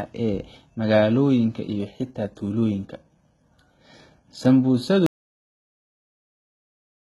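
From the start the speech sounds gritty and lispy on the s sounds, with nothing above 11.8 kHz. That's likely HE-AAC compression at a very low rate, around 16 kbps, faking the treble from lower bands. At 5.06 s it falls into total silence, with no room tone, right through to the end: an audio dropout to silence, with the input likely lost and silence written.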